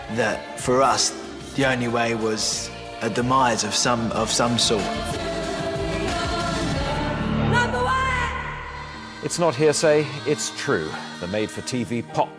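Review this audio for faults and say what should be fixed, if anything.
Nothing here needs fixing; there are no faults to chase down in this one.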